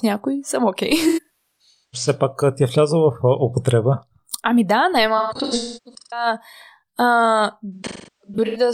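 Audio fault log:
1.08–2.08 s AAC frame loss with concealment: about 640 ms of frames missing across 0.85 s, runs up to around 0.3 s, decoder refilling from stale spectrum, so smeared, noisy patches.
5.17–6.26 s AAC frame loss with concealment: about 725 ms lost over 0.94 s, longest gaps near 0.3 s; repeated last-good spectrum gives phasey, blurred sound.
7.73–8.57 s AAC frame loss with concealment: about 597 ms lost across 0.85 s, stretches near 0.3 s; concealment substitutes reused spectral content, leaving a smeared, noisy stretch.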